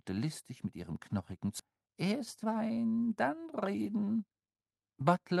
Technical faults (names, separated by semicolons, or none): skip ahead; jitter buffer speed-up